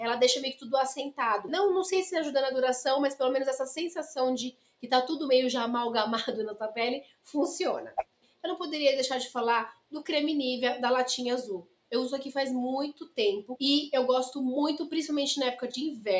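Throughout the clip the level pumps and flutters, with sustained parts and tails thinning out while attacks stay intact. A speech-tuned noise suppressor applied to music or sounds is treating steady content as noise, swinging gain by around 10 dB, on top of call microphone processing that leaves nothing above 8 kHz.

Sudden dips cut into held sound at 4.51–4.87 s, 7.01–7.34 s, 7.98–8.44 s, 9.72–9.93 s, 11.63–11.92 s and 12.93–13.18 s. Each is sound cut by the noise suppressor, dropping about 18 dB (about 17 dB in the last) before recovering.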